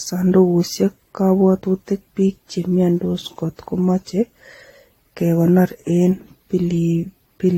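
Speech, and it's swirly, smeared and hollow all the way through, with blurred attacks and nothing above 16.6 kHz. That's generation loss, likely from repeated trips through a lossy codec, something like AAC around five times, with each pass stacking more artefacts.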